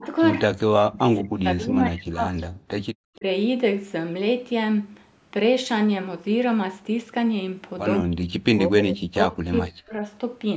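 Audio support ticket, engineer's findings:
Echo canceller likely misreading double talk as echo, attenuating near-end along with it: speech suppressed in double talk. Short dips of about 20 dB at 0.00–0.05 s and 3.17–3.24 s. Longer broken-up gaps, down about 40 dB, at 0.81–2.73 s and 8.02–10.02 s.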